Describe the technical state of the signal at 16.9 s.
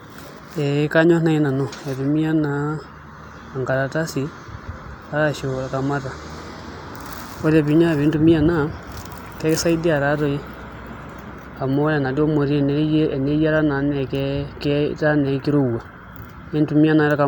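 At 16.9 s the signal is intact, with no fault audible at that point.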